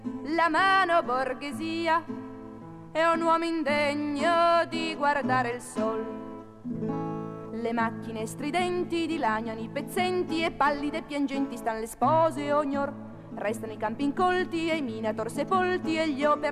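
No technical faults are audible.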